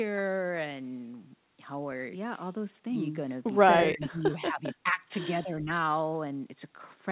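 Speech over a narrowband call path with nothing above 4 kHz, which fits G.711 mu-law, is pulled down from 3.89 to 5.02 s, by up to about 20 dB, and again from 5.43 to 5.7 s, by about 10 dB. This is likely speech suppressed in double talk. The level ducks and recovers rather than dropping to clean gaps, which sets it apart from packet loss.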